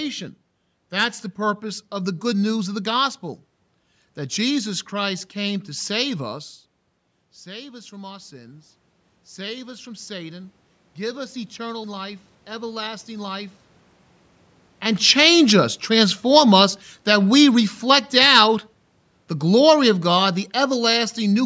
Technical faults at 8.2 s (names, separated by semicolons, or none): automatic gain rising